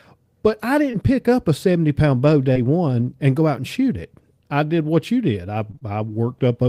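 Short concealed packet loss smears the speech at 0.91, 2.53, and 5.71 to 5.83 s after "what you did I". About 20 ms went missing each time, with three back-to-back losses in the last stretch, and the receiver patched the gap by extending the preceding sound.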